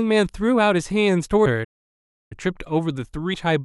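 At 1.46 s the speech jumps forward as compressed frames are skipped. Roughly 150 ms of audio is missing, which fits about five lost 32 ms frames that were either absent or rejected by the decoder. On a spectrogram the harmonic tracks break off and restart at a different point.

From 1.64 to 2.32 s the sound halts mid-flow for about 0.67 s and then resumes. This is a playback stall, most likely the player running short of data or its thread being blocked. The waveform shows a flat line across the gap, and the spectrogram shows an empty blank band between two abrupt edges.

At 3.34 s a second skip of compressed frames occurs. Roughly 200 ms vanishes, consistent with around seven 32 ms frames being dropped. It produces the same discontinuity in the spectral tracks.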